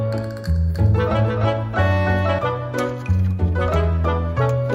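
A doubled audio track runs from 0.75 to 2.39 s: a dry, somewhat quieter copy trails about 300 ms behind, likely from a slower capture path, cutting in and out abruptly.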